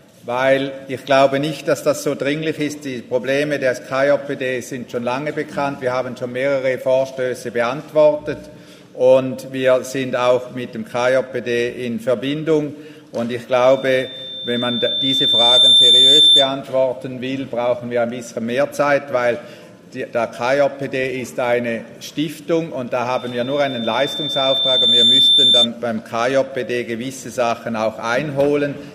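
Loudspeaker feedback squeal appears from 13.6 to 16.61 s and again from 23.16 to 25.68 s. A pure 3.6 kHz tone swells over about two seconds to roughly 10 dB above the sound, as the microphone re-amplifies its own loudspeaker. A spectrogram shows a bright horizontal line, and the waveform shows a growing envelope.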